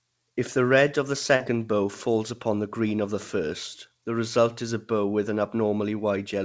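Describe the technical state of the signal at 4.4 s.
At 4.4 s the audio is intact, with no fault present, only the normal band limit of the call path, which passes nothing above 8 kHz.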